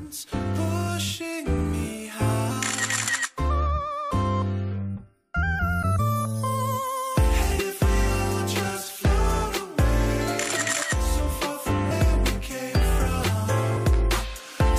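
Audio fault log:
0.87, 2.5, 5.98, 7.58, 10.81, 11.9 and 13.76–13.78 s, compressed frames skipped: the sound jumps ahead by about 50 to 150 ms, in steps that fit 23.2 ms frames.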